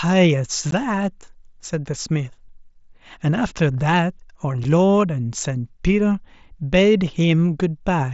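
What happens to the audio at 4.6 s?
Unconcealed Bluetooth headset packet loss at 4.64 s: a single voice packet, about 7.5 ms of audio, was lost between headset and phone, which fits one lost mSBC frame. Nothing was done to hide the gap, so silence or an idle pattern filled it. The result is a tiny, sharp-edged dropout in the speech, set against the wideband headset codec's light graininess.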